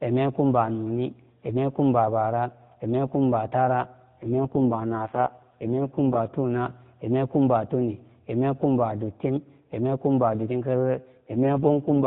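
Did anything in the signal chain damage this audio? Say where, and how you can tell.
Yes. There is an AMR rate drop at the codec stage, from 4.2 to 6.2 s and from 11.2 s to the end. The narrow band holds and nothing drops out. The speech turns buzzy and synthetic. That fits the network forcing 12.2 kbps down to 4.75 kbps.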